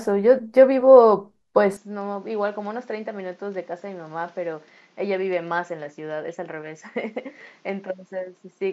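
From 1.77 s, speech loses all above 7.6 kHz, falls about 10 dB and gains new noise: likely an input switched to a poorer device.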